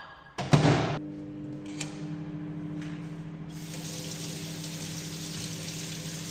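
At 0.97 to 0.99 s there's a skip ahead. About a second of audio was dropped and playback jumps straight on, with the two sides joined almost seamlessly. From 2.9 to 4.36 s a jitter buffer speed-up kicks in. The receiver trims tiny pitch-period slices to shed excess delay, about 150 ms in total, so the sound runs roughly 9% fast at unchanged pitch.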